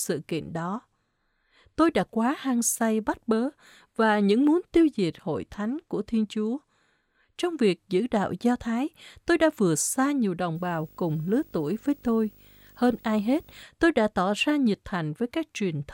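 Speech, with video or display buzz from 10.55 to 13.63 s: a screen or video cable couples in a faint 50 Hz field-rate buzz plus a 15.6 kHz line tone, which mains hum lacks.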